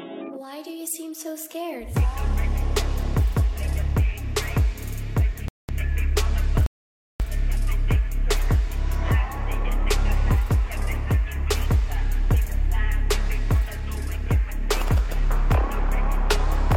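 At 5.48 s the audio drops to silence for about 0.21 s, then again at 6.66 s for about 0.54 s, before picking up exactly where it broke off. These are rebuffering stalls: playback outran the downloaded data and halted until more arrived, so nothing is skipped but time is inserted. On a waveform each shows as a flat line splitting the signal; a spectrogram shows a clean blank vertical band with no smearing at either edge.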